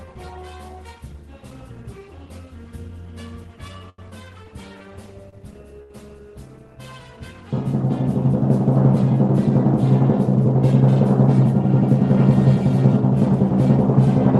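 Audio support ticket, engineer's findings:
Short stall from a late packet, three times: 3.89 to 3.99 s (88 ms), 5.29 to 5.34 s (31 ms), 5.83 to 5.91 s (72 ms). Jitter buffer ran dry, so the last sound was stretched until the packet landed. Nothing lost. Delay grows each time. Call codec's 12 kHz cut-off.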